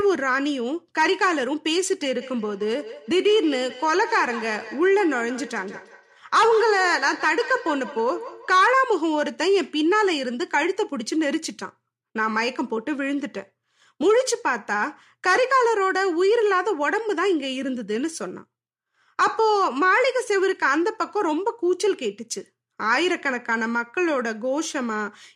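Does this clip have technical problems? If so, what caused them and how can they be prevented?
Yes. Feedback echo between two devices occurs from 2.21 to 8.77 s. One device replays the other's audio into its microphone, so the speech returns roughly every 150 ms, about 13 dB below the original. To prevent it, keep only one device's microphone and speaker active per room.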